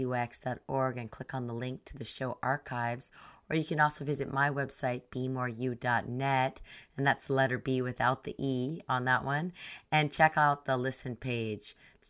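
Nothing in this bit of speech stands out as a technical fault; there's no moment where anything goes wrong.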